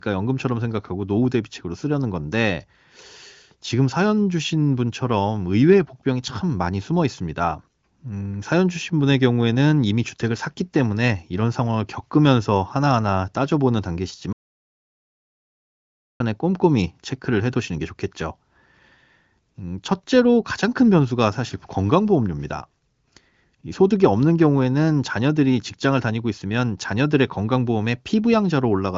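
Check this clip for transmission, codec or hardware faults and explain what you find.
One fault stands out: an audio dropout to silence from 14.33 s to 16.20 s, a gap of about 1.87 s. The speech stops abruptly mid-flow and resumes just as suddenly, and the gap is silent with no room tone at all. That points to the input being lost while the recording or encoding chain kept writing silence, likely a momentary disconnection or mute upstream. Whatever was said during that gap is not recoverable. The speech itself carries AMR-WB band-limiting, with nothing above 7.5 kHz.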